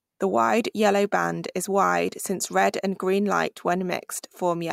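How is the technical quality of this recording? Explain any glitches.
No glitches or technical faults can be heard anywhere in this speech recording. There is nothing in it that needs explaining.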